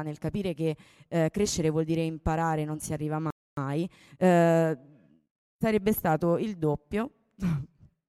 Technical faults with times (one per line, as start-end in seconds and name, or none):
3.30-3.57 playback stall
3.57-4.63 time-compressed catch-up